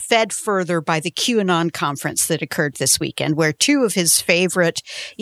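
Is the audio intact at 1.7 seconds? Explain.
Yes, the speech is intact at 1.7 seconds, with no audible fault at that moment.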